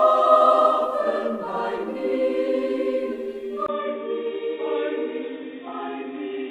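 At 3.66 s the audio turns dull and boxy until the end, with nothing above 3.8 kHz, a gap of about 20 ms, and a faint new noise floor at unchanged loudness. That gap and noise, not just a filter, point to an input switched to a poorer device, likely.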